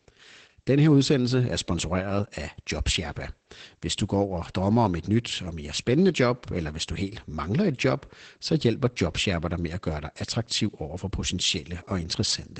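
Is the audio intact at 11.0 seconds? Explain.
No. At 11.0 seconds, as across the whole clip, the speech has been through Opus voice compression. The SILK linear-prediction coder ran in wideband mode and coded the excitation coarsely, which fits a bitrate of about 12 kbps. As a result there is nothing above 8.7 kHz, so the speech loses its top-end air and sibilant detail, and the damage is plainly audible as a muffled, hoarse and slightly robotic quality.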